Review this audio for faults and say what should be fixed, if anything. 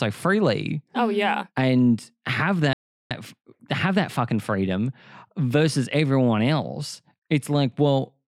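Speech cuts to silence from 2.73 to 3.11 s, then resumes: likely a Bluetooth stall, with delayed packets emptying the playback buffer. Reduce wireless interference and distance.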